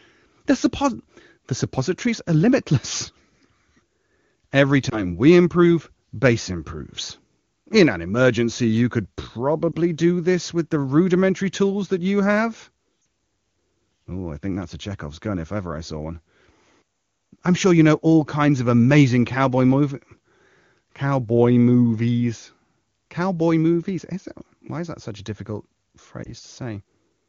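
Lost AMR speech frames at 4.90–5.11 s (just before "we improve base improves"), 9.72–9.76 s, 13.01–13.05 s (after "tools that you have") and 26.24–26.31 s. Corrupted frames were concealed by reusing the last pitch and vocal tract settings at falling gain, heard as brief dips or warbles. The 13.01 s gap is longer, fitting two 20 ms frames.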